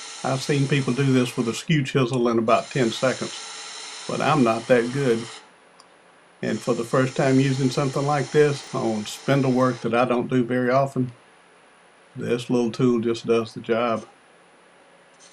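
At 8.64 to 8.68 s, chunks play out of order. One 10 ms chunk lands three chunks late, so this brief span sounds jumbled across the three hard joins. The waveform shows abrupt steps at each join, and the spectrogram shows thin vertical broadband lines.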